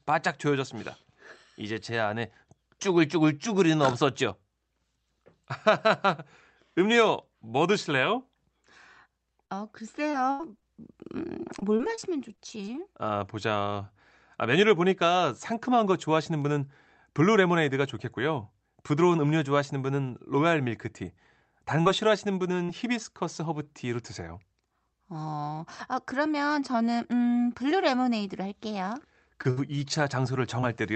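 Scattered short gaps run from 9.45 to 13.79 s. Around ten separate packets arrived too late or not at all, the longest gap about 70 ms. Each hole was patched by extending the preceding sound, so the stretch carries brief ticks, smears and hiccups.

Short concealed packet loss follows at 21.81–21.87 s, where 40 ms never reached the decoder. It was filled by continuing the prior sound and blending back, heard as a quick smear or wobble. A second, 20 ms loss at 22.65–22.70 s behaves the same way.

Lost packets rebuilt from error correction overlap the tail of each concealment, at 21.85–21.87 s and 22.68–22.70 s, and occur alone at 22.84–22.86 s. Each is a 20 ms frame replayed from a low-quality copy carried in the next packet. The gap is bridged, but the sound briefly turns rougher and noisier.

Scattered short gaps return at 28.80–30.64 s, with about three dropouts, the longest around 70 ms. 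They are smoothed over in the same way, leaving short hiccups. Throughout, the Opus call path at 48 kbps limits the audio to about 8 kHz.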